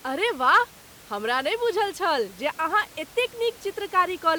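Speech recording with no technical faults to report; the room's background noise sits about 24 dB below the speech and belongs to the original recording.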